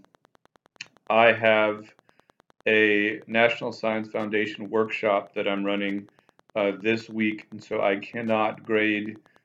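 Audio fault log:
Throughout, Wi-Fi interference: there's a steady tick under the sound, about ten a second, sitting roughly 35 dB below the signal, so it's quiet. That spacing matches a Wi-Fi beacon going out every 102.4 ms. A nearby radio's beacons get picked up and rectified by the audio circuit, and each one turns into a short click on a very regular clock.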